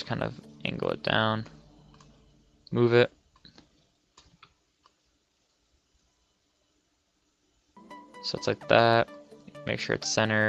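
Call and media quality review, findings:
No findings for this call and media quality review; nothing in the audio calls for a ticket.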